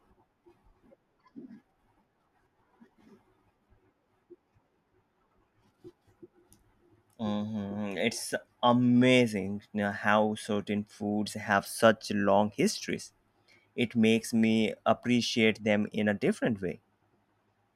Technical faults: none

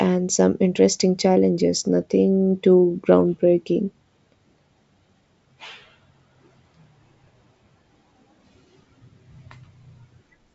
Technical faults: none

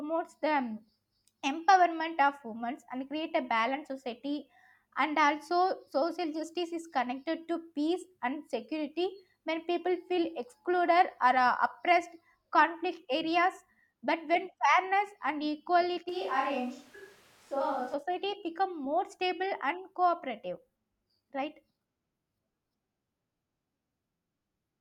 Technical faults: switch to a distant microphone

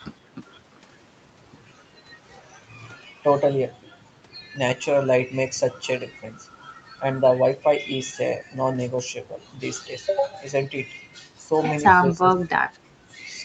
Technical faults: background gated by the echo canceller; speech suppressed in double talk

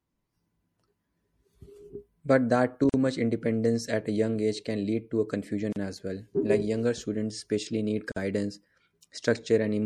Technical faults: MP3 compression; gap at a join of encoded pieces

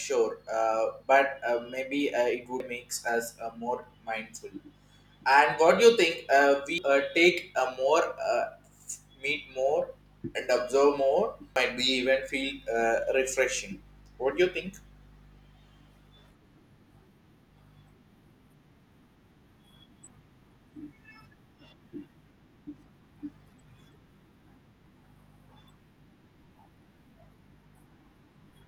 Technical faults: damaged data in a compressed stream; dropped samples

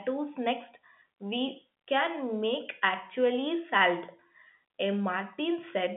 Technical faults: none

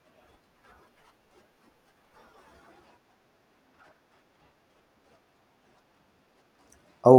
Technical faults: none

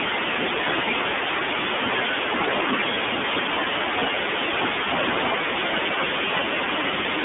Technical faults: iLBC codec

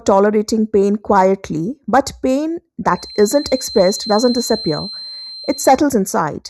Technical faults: channel delay (comb filtering); feedback whistle

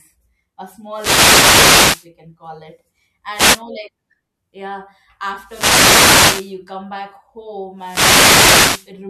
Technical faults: wireless microphone noise hit

